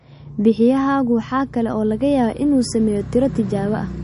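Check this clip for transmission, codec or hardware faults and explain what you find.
One codec fault runs through the whole clip. The speech has nothing above 10.6 kHz and a plainly audible watery, swirling texture, likely from MP3 compression at a low bitrate around 40 kbps. With bits short, the encoder cuts the treble and drops weak frequency lines that flicker between frames. That flicker, not just the dull top end, separates it from a simple low-pass filter.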